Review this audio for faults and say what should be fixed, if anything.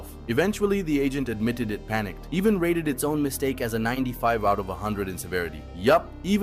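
From 2.94 s to 4.21 s the sound plays 6.3% fast and rises 106 cents, just over a semitone. Then it snaps back. This is likely a drift correction step: clock-matching software changed the playback rate in one jump to rebalance its buffer. To prevent it, have the resampler correct clock drift in small, gradual rate adjustments.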